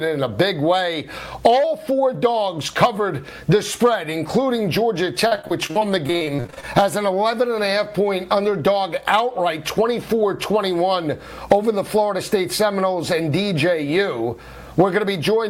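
From 5.27 to 6.65 s the sound turns choppy, with small pieces dropping out in quick succession. This is repeated packet loss (robotic sound): audio kept arriving late or not at all, and each short hole, the longest about 44 ms, was papered over by stretching the preceding sound. About a third of that 1.4 s stretch is this patched-in material.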